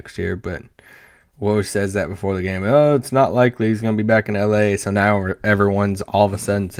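No technical faults can be heard anywhere in the speech.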